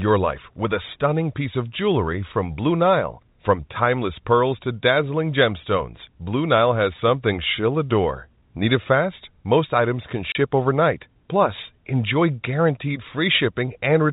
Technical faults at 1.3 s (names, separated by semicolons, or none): none